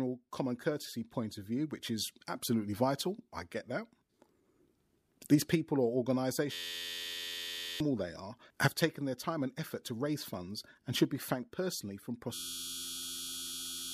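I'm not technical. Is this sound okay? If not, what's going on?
No. From 6.53 to 7.80 s, and again from 12.34 s to the end, the speech turns into a steady, low electric buzz. This is a system hang loop: the computer froze while its sound hardware kept replaying one tiny 11.6 ms scrap, about 86 times a second, which fits a 512-sample buffer. Roughly a second and a half of speech is lost each time.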